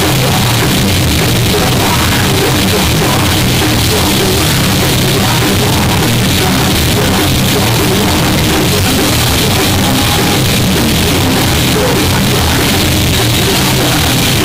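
From start to finish the audio is extremely loud and harsh, flattened into a near-square wave at an almost fixed, high level, with background noise as loud as everything else. This is float read as integer, likely 32-bit float samples decoded as 32-bit integers.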